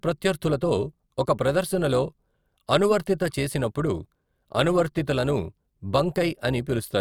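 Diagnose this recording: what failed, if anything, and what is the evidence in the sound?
A metallic buzz runs through the entire speech clip, a ripple at around 200 Hz that adds extra tones around the voice, with the level swinging by about 6 dB. This is overlap-add ripple from a frame-based processing stage, such as call processing or a codec's resynthesis. Windowed frames were recombined with an overlap whose windows do not add to a constant gain, so the level dips and peaks once per frame, at roughly 200 frames per second.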